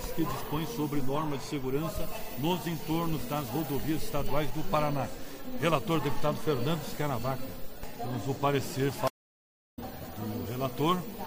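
Near the end of the audio there's a stream reconnect: at 9.08 s the sound drops out, and after about 0.67 s of silence it comes back at 9.79 s. It doesn't pick up where it left off, though. It jumps ahead by roughly 0.7 s, so a chunk of material is simply skipped. That's the signature of the connection breaking, the player going quiet, reconnecting and starting a fresh decoder on a live stream that kept moving.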